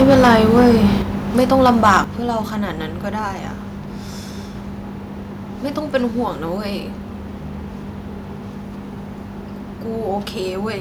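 From 0.0 to 0.87 s the speech has a harsh, crackling edge, likely microphone overload, with peaks driven about 7 dB past the converter's limit. The waveform shows flat-topped peaks across a noticeable share of samples, and the spectrogram shows broadband smearing at each loud syllable.

At 1.02 s voice and background drop together by about 5 dB, likely the microphone volume stepped down by the call software reacting to the distortion. On the waveform this appears as a sudden narrowing of the envelope, with no fade.

From 1.38 to 1.98 s the crackle returns more mildly, likely microphone overload again, about 5 dB over, with a small share of samples flattened.

At 2.04 s the level falls by about 7 dB in one step, likely the microphone volume stepped down once more, leaving a second abrupt drop in the envelope.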